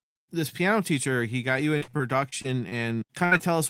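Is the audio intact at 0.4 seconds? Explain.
Yes, the speech at 0.4 seconds is intact, with no audible fault at that moment.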